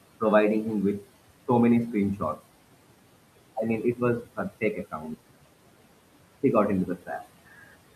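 The whole clip carries noise suppressor artifacts: the room noise gets pushed down by about 18 dB between phrases and swells back under the speech. Then there's speech cut by the noise suppressor at 4.61 to 5.05 s and again at 6.86 to 7.09 s. The suppressor mistook quiet bits of speech for noise and dipped them by about 13 and 12 dB, so roughly a tenth of a second in each stretch sounds swallowed.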